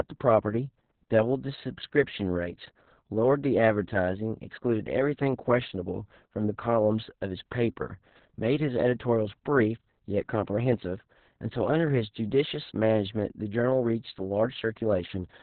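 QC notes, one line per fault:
Throughout: Opus voice compression, heavy damage. The speech has been squeezed through the SILK linear-prediction coder at a rate that points to about 6 kbps, in narrowband mode, so nothing survives above 4.3 kHz and the sound is dull and boxed-in. With so few bits the excitation signal is coded crudely, which gives the speech a hoarse, buzzy, faintly robotic edge. It was sent in 60 ms frames.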